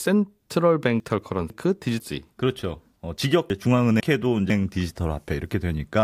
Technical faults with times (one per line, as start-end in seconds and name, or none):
1.00-2.00 chunks out of order
3.50-4.50 chunks out of order